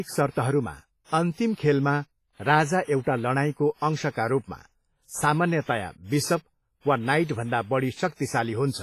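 Heavy WMA compression runs through the whole speech recording, likely from a low-bitrate encode around 24 kbps. Its long transform blocks smear quantisation noise into a ringing, washy hiss that breathes with the voice, weak detail is stripped away, and nothing remains above 15.4 kHz.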